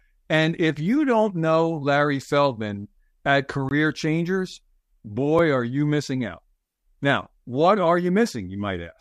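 A speech clip with two blocks of digital silence, where the output buffer likely went unfilled and dropped to zero: a 20 ms hole at 3.69–3.71 s and a sharp tick at 5.39 s, just before "are you missing out".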